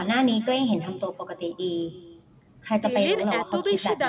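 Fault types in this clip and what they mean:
echo with no canceller: the far end's loudspeaker feeds its microphone unchecked, so each phrase returns about 300 ms later as a faint, thin copy, roughly 21 dB down.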